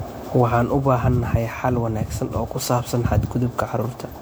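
From start to finish the speech sounds swirly, hollow and smeared, with blurred consonant attacks. That is generation loss, likely from around seven MP3 passes at what fits 128 kbit/s. Each re-encode quantises on a shifted frame grid, stacking noise and spectral holes.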